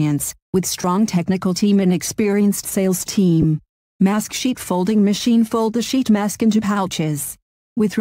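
Lost LE Audio frames at 0.82 to 0.84 s and again at 3.42 to 3.44 s: each gap of about 20 ms, which fits two 10 ms frames, is filled by the decoder repeating the last spectrum with scrambled phase, so the sound briefly turns into a short noisy smear.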